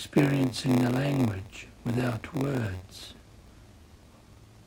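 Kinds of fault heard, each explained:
Block size mismatch (padded): one stage hands over shorter blocks than the next one reads, and the shortfall in each block gets filled with zeros. Throughout this speech you hear a steady buzz at about 93.8 Hz, which is the rate of those tiny silent gaps and fits a 512-sample read. The padding also stretches everything to 0.938 times normal speed, so it drags slightly while the timbre stays about where it should.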